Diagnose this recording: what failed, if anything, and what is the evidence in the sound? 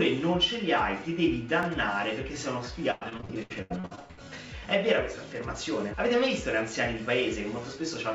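A repeated buffer at 1.63 s points to the driver or buffer stage. When fresh audio failed to arrive in time, the device replayed its last block once. The duplicated stretch lasts 10 ms, which fits a 10 ms buffer, so it registers as a brief click rather than a stutter. On a waveform, an identical 10 ms segment appears twice back to back, with a hard discontinuity at the join. A spectrogram shows a thin vertical broadband line at that instant.

Between 2.91 and 4.20 s, repeated packet loss produces choppy, robotic sound. The fault lies in the network stage of the WebRTC call path: packets kept going missing, and concealment stretched the previous sound across each hole. About a dozen gaps fall in this span, the longest 103 ms, and roughly half of the span is synthesized filler. On a spectrogram, the patches appear as smeared, repeating harmonic bands with abrupt edges against the G.722 band limit, which leaves nothing above 8 kHz. 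On a waveform, short looped sections alternate with sudden jumps in amplitude.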